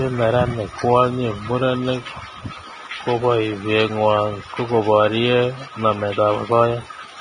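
From start to end the speech is hissy and grainy, with nothing above about 9.7 kHz and roughened, smeared consonants. That's likely heavy Vorbis compression: the treble gets quantised so coarsely that its detail turns into noise, which fits a bitrate around 22 kbps.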